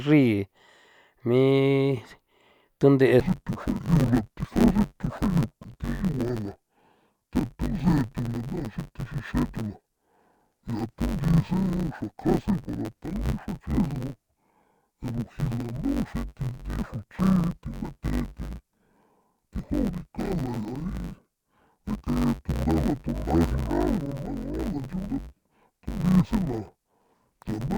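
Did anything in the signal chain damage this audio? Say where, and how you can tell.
Yes. From 3.2 s to the end, the speech turns dull and robotic with a steady buzz near 94 Hz, the sign of interleaved audio read as planar at the sample-format conversion stage. Each 10.67 ms block, which fits a 512-sample buffer, has its alternating left and right samples split into halves that play at half speed side by side. The pace stays correct and there is no clear octave drop, which rules out a sample-rate mismatch.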